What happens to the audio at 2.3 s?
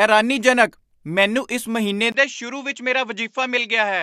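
An input switched to a poorer device accounts for what you hear at 2.3 s. From 2.12 s to the end, right after "ਮੈਨੂੰ ਇਸ ਮਹੀਨੇ", a 20 ms gap marks the switch. The speech then comes through a narrower path with nothing above 7.6 kHz, most likely because the system changed to another microphone or a headset's call profile. It sounds duller and a little quieter, and a faint new background noise sits well beneath it.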